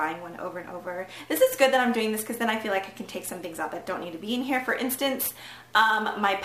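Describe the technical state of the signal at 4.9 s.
At 4.9 s you're hearing sample clock jitter, present across the whole clip: timing wobble of roughly 5 microseconds smears steep waveform slopes into a hiss about 20 dB down.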